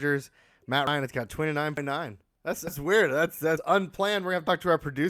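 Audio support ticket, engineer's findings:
Audio missing between chunks: butt-spliced skips of about a tenth of a second at 0.87 s (just before "it's got"), 1.77 s (just after "it's got"), 2.67, 3.57 and 4.47 s in the speech. They are spaced evenly and leave no silent gap, unlike a dropout. The likely cause is a capture stage working in 1.0 s chunks that loses audio at each handover.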